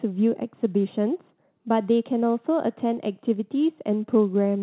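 No technical faults can be heard; the audio arrives over a call path with nothing above 4 kHz, a narrow band that fits a G.711 mu-law telephone codec.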